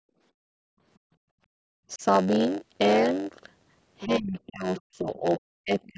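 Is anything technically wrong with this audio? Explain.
Yes, the speech has several faults.

Block size mismatch (padded), throughout: one stage appears to write shorter blocks than the next stage reads, and the missing part of each block is filled with zeros. That tiny silence repeats in every block, producing a steady buzz at 91.9 Hz over the whole clip. Because extra silent time is inserted each block, the speech plays at 0.919 of its normal speed, stretched in time but at about its original pitch.

Background gated by the echo canceller, 0.00 to 0.82 s and 0.98 to 1.60 s: while the loudspeaker was active, the canceller pulled the microphone down hard, by about 39 dB at the deepest point. The room sound underneath drops out for roughly 700 ms in the first stretch and about half a second in the second, then comes back once the canceller releases. The band stops at 8 kHz, as expected from call microphone processing.

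Speech suppressed in double talk, 1.88 to 2.03 s, 4.05 to 5.26 s, and 5.64 s to the end: the talker's voice dips while, likely, both sides spoke at once and the canceller could not separate the local voice from the loudspeaker echo, so it turned everything down. The first dip is brief and shallow, about 10 dB. The later two go to about 30 dB down, one lasting around a second and the last about 200 ms.

Other side's voice leaking through, 4.00 to 4.04 s, 4.77 to 4.81 s and 5.82 to 5.87 s: short scraps of a second voice come through. The canceller likely failed to remove all of the loudspeaker signal picked up by the microphone. The first two scraps sit about 20 dB below the talker. The last, at about 35 dB below, is faint and clipped short.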